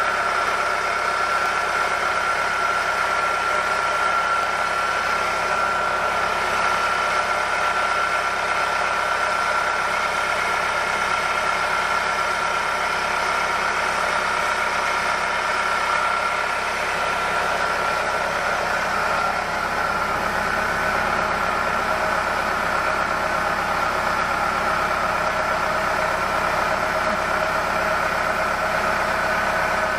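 At 0.48, 1.46, 2.44, 4.43, 9.43 and 11.41 s the audio jumps in a tiny skip, a sign of overlap between stream segments. Neighbouring one-second segments claimed overlapping time, so the player discarded a few to about 20 milliseconds of sound that was never actually duplicated, splicing the waveform abruptly. Unlike a dropout, there is no gap or silence, only a sudden skip forward. The skips fall at segment boundaries, which points to this timing fault rather than random damage.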